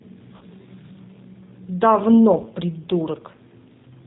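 Throughout, the speech carries G.729 codec damage, plainly audible as a rough, slightly synthetic texture with nothing above 4 kHz, which fits an 8 kbit/s G.729A stream; a spectrogram shows a hard empty band over 4 kHz and smeared harmonics.

From 0.37 to 0.44 s, VoIP packet loss concealed by the speech codec stretches the last sound out as it fades, consistent with about 40 ms lost; the waveform shows a decaying envelope. The same happens from 2.42 to 2.49 s after a loss of about 20 ms, and the speech stays weak or distorted as the decoder recovers.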